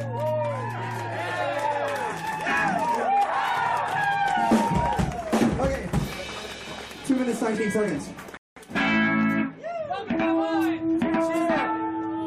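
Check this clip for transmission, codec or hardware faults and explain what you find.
There's one fault here, a rebuffering stall at about 8.37 s. The player ran dry of downloaded audio and simply paused until more data showed up, so the sound drops to silence until about 8.57 s and then picks up exactly where it left off. Nothing goes missing; you just get roughly 190 ms of dead air inserted into the timeline, which lands as an odd little hiccup in the flow.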